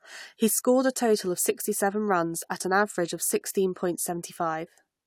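No technical faults can be heard in this recording.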